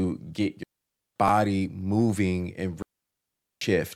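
Digital wireless dropout at 0.63 to 1.16 s: the radio link lost too much data, so the receiver muted the speech for about 0.53 s, leaving a clean near-silent hole with no noise burst at either edge. Chunks out of order at 1.28 s: a 5.33 ms piece of audio arrived one chunk late and played after the piece that should follow it, causing a brief jumbled flicker at the hard joins. Digital wireless dropout again at 2.82 to 3.61 s, muting for about 0.79 s with the same quick fade into clean silence.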